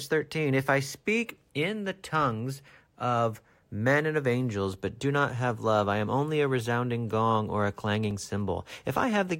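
A repeated buffer at 8.11 s: fresh audio arrived late, so a 2.9 ms chunk played twice, fitting a 128-sample buffer and heard as a brief click.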